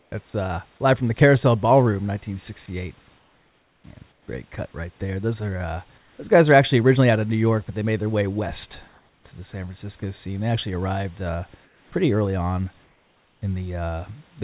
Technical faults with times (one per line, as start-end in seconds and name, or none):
0.00-0.34 comfort noise in place of the background
0.30-0.34 sound dropped by the voice detector
3.06-3.08 sound dropped by the voice detector
3.06-4.28 comfort noise in place of the background
5.98-6.18 comfort noise in place of the background
8.88-10.02 comfort noise in place of the background
10.00 sound dropped by the voice detector
11.64-13.42 comfort noise in place of the background